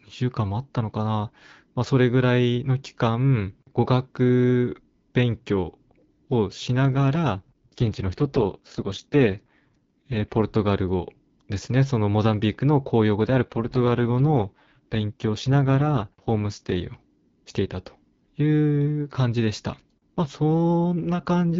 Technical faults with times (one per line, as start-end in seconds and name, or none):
7.36-10.44 AMR rate drop
13.22-16.76 AMR rate drop